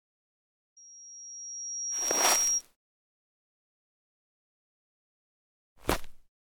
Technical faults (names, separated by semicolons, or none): loudspeaker feedback squeal